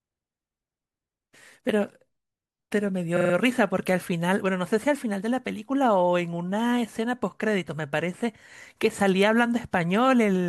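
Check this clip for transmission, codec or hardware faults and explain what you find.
One transmission fault stands out: repeated frames from 3.16 to 3.33 s in this speech clip. A short run of compressed audio was delivered or written more than once, so the decoder played the same stretch again and again. A block of about 43 ms, which fits a run of two frames, is heard four extra times, adding roughly 171 ms to the speech. It sounds like a rapid mechanical stutter.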